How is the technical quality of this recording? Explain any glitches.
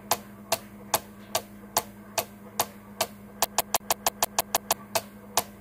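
The recording has one clear glitch, a CD stuck on one turn, from 3.44 s to 4.73 s. A scratch keeps throwing the laser back a track, so one 160 ms slice of the sound repeats eight times with a tiny mute at each jump. The result is a fast, even stutter about six times a second. On a waveform, identical 160 ms blocks tile side by side with brief gaps between them. On a spectrogram, the same pattern repeats in vertical strips at regular intervals.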